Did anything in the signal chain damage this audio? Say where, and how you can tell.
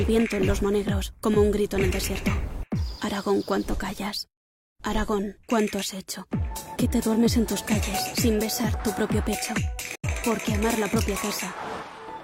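No, nothing in the signal chain can be heard damaging this audio. No stage from capture to playback leaves a mark that points to a problem.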